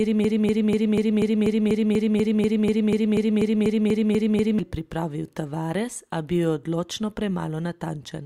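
From the first instant until 4.59 s, the speech is caught in a broken-record loop: one 244 ms fragment repeats exactly, back to back, about 18 times, likely from a stalled player or stream resending its last buffer. The waveform and spectrogram show identical blocks tiling every 0.24 s, and the audio that belonged there is missing.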